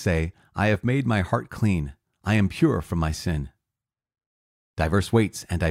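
No technical faults can be heard anywhere in the speech recording, and the signal holds steady and continuous throughout.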